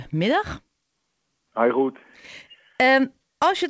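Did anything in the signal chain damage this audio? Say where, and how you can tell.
Yes. Clock drift between sender and receiver in the buffer stage: the sender's clock runs roughly 4% slow, draining the jitter buffer. The waveform shows small, unevenly spaced seams throughout.

Repeated timing corrections from 0.06 to 3.63 s: the receiver repeats short slivers, playing at 97% speed and adding about a tenth of a second. The spectrogram shows duplicated frames.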